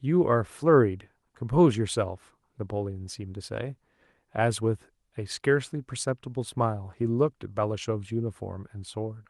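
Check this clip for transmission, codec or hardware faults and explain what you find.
No faults turn up anywhere in this clip.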